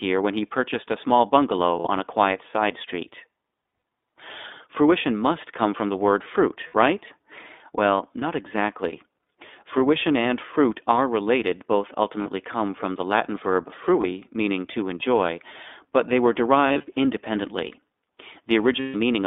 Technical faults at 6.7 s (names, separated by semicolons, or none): iLBC codec; lost iLBC frames